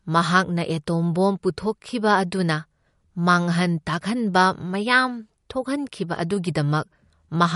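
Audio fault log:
Throughout: MP3 compression. Nothing is heard above 11.2 kHz, and the speech sounds watery and swirly as weak frequency lines switch on and off between frames; this is likely low-bitrate MP3 encoding, with audible damage consistent with 48 kbps.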